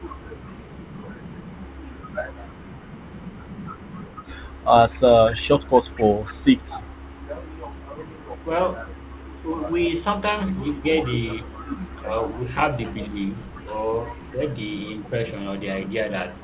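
An echo canceller on the far end, likely with its loudspeaker feeding the microphone, failed to remove all of the returned signal, so an echo leak runs from 0.0 to 16.4 s. A faint delayed copy of the speech trails about 234 ms behind, very low, roughly 35 dB under the main level. It sits inside the narrowband call sound, which stops at 4 kHz, consistent with a G.711 path, and comes across as a ghostly shadow.

Between 9.47 and 13.21 s, the echo canceller likely could not tell the local talker from the loudspeaker echo while both sides spoke, so it turned the talker down too. This speech suppressed in double talk adds up to about a second of affected audio, with dips reaching roughly 10 dB that make the speech fade and thin in patches. A milder repeat from 14.31 to 15.9 s lasts only a brief moment and drops around 5 dB.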